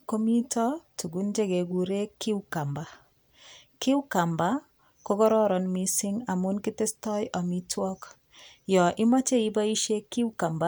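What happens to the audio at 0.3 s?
Nothing goes wrong at 0.3 s; the speech there is intact and carries through that moment without any audible fault.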